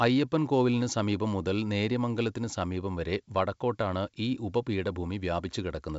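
Speech carried over G.722 wideband telephone coding at 64 kbit/s, with content reaching up to about 7.7 kHz, and nothing in it is technically wrong.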